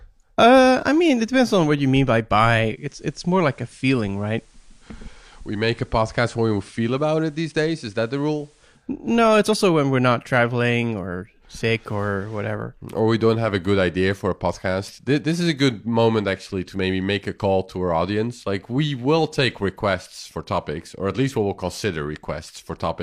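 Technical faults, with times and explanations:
2.67 to 8.88 s, digital radio blending to analogue: the speech turns about 2 dB quieter and faintly hissy. The receiver lost the digital stream, cross-faded over 242 ms to the station's FM broadcast, then returned.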